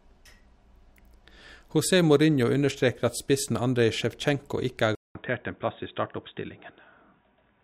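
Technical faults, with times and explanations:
4.95–7.63 s, input switched to a poorer device: the recording likely moved to a different, lower-grade input, such as another microphone or a headset's call mode, partway through. After a gap of about 200 ms, the speech returns duller and boxier, with nothing above 3.8 kHz, because the new path passes a narrower band. It is also roughly 5 dB quieter and sits on a faint new background hiss that continues to the end of the clip.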